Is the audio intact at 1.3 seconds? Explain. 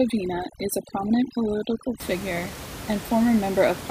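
No. From 0.0 to 2.0 s, overdone noise removal is at work: the noise reduction was set too strong and pulls individual frequency bands far down whenever they sit near its noise estimate, quiet speech detail included. The background drops and breaks up into twinkling specks in near-silent gaps.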